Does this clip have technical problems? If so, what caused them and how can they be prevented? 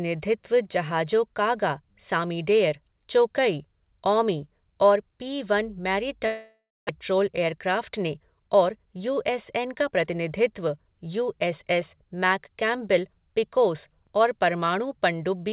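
Yes. From 6.26 to 6.91 s, a likely long network dropout stopped packets arriving. The receiver stretched the last sound into a fading buzz or hiss for about 0.63 s, ending in 0.23 s of silence, and 0.4 s of speech is lost. Prevent it with a more stable network path or redundancy and forward error correction.

From 7.11 to 10.05 s, a jitter buffer speed-up drained excess buffered delay by cutting out pitch-period slices, about 0.2 s in total. The speech runs 107% fast at unchanged pitch and sounds hurried. Prevent it by reducing network jitter so the buffer does not overfill after bursts.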